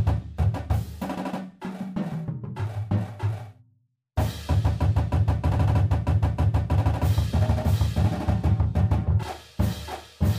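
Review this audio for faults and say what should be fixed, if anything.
Damaged data in a compressed stream causes a brief glitch from 9.22 to 9.24 s. Corrupted bytes made the decoder misread frames and resync. Checksums and verified transfers would keep the stream intact.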